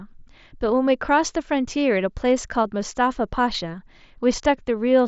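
A speech recording carried over a wideband Bluetooth headset link, with concealed Bluetooth headset packet loss at 2.64 s: a 7.5 ms gap, consistent with a single lost packet, filled by repeating recent waveform and nearly inaudible.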